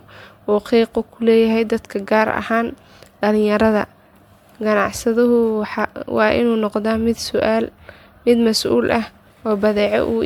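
Throughout the speech, the signal has likely passed through a lossy MP3 codec again and again, roughly seven times over, each pass requantising on a shifted frame grid so that errors and spectral gaps pile up rather than staying put. That generation loss gives the sound a swirly, hollow, smeared character, with consonant attacks blurred, worse than a single encode would produce. Nothing remains above about 19.9 kHz, which fits a 128 kbit/s MP3 chain.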